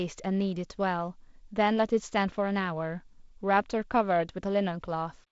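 No technical faults are audible.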